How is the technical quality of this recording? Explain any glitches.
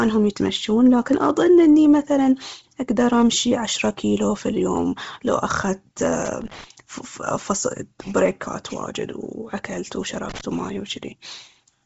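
The recording has two faults: a band-limited, grainy speech sound throughout and two brief bursts of crackle.

From start to finish, the speech sounds breathy and grainy with nothing above 7.7 kHz. The likely cause is heavy Bluetooth LC3 compression, which fits a low bitrate near 24 kbps: the treble is discarded and replaced with noise.

From 6.25 to 6.64 s, and again from 10.29 to 10.41 s, irregular scratchy crackle cuts in. This is loose connector crackle, where a faulty contact rapidly breaks and remakes the signal path.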